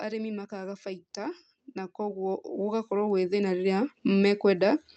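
Automatic gain rising from 0.49 s to 4.46 s: the gain control treats the speech as too quiet and lifts its level by about 14 dB, so voice and background swell together. Through the call codec, the audio tops out near 8 kHz, consistent with Opus.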